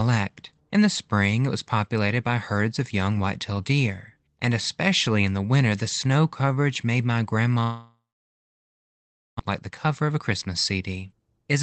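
After "snow coverage made my", from 7.63 to 9.41 s, a long network dropout likely stopped audio from arriving. The receiver stretches the last sound into a fading buzz, then leaves near-silence for about 1.4 s, and about 1 s of speech is never heard.

The stalled packets left roughly 0.7 s of extra delay, so from 9.51 s to the end at 11.63 s a jitter buffer speed-up trims pitch-period slices, about 0.3 s in all. The speech runs at 113% speed, hurried but at unchanged pitch, through a call path band-limited to 8 kHz.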